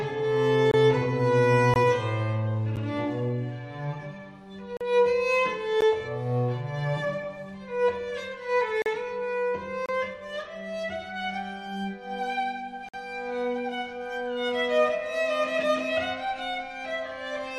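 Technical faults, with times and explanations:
0.71–0.74, 1.74–1.76, 2.76, 4.77–4.81, 5.81, 8.82–8.86, 9.86–9.89 and 12.89–12.94 s: gap between stream segments. Hard-edged silent holes of about 10 to 48 ms fall on boundaries of what sound like 1-second segments, where mismatched time stamps leave a span the player fills with silence. Unlike a dropout, nothing is missing: the sound resumes exactly where it stopped, so each hole adds time instead of cutting any out.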